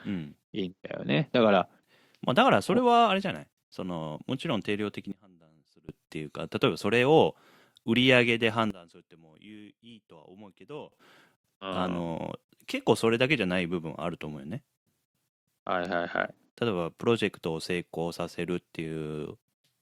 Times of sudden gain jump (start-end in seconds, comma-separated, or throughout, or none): 5.12-5.89, 8.70-10.92, 12.71-12.80